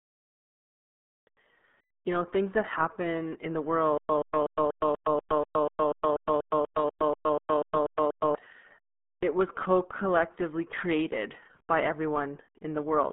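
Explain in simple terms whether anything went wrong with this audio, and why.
Yes, two things went wrong. First, the whole speech clip was squeezed through the RealAudio 14.4 codec, an old dial-up modem format that throws away most of the detail. Nothing above about 3.8 kHz survives, so the voice sounds muffled, thin and gargly from start to finish.

Second, there is a stutter with silent gaps from 3.98 to 8.35 s, right after "that happen in the". The player or stream likely stalled and kept replaying its last fragment. You hear the same 128 ms scrap about four times a second, each followed by 115 ms of dead silence, and whatever should have played there is lost.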